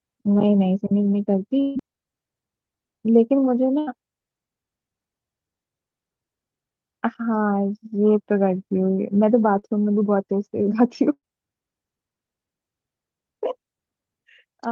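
At 0.33 to 0.37 s and again at 9.59 to 9.65 s there is short concealed packet loss: about 20 ms and 40 ms of speech never arrived, and the decoder papered over the holes by extending the preceding sound. Each is only a quick smear or wobble.

The bursts of packet loss at 1.61 to 1.77 s, 3.79 to 3.89 s and 11.13 to 11.25 s differ: about 140, 80 and 100 ms went missing. The last sound is stretched and dies away, then the speech resumes further along with material skipped.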